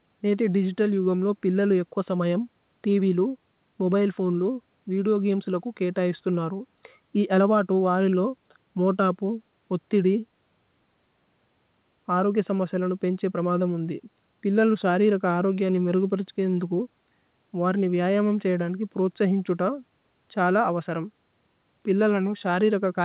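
Nothing's wrong with this speech clip; it has simply been through a call, and the top of the sound stops at about 4 kHz, which fits a telephone-band codec like G.711 A-law at 64 kbps.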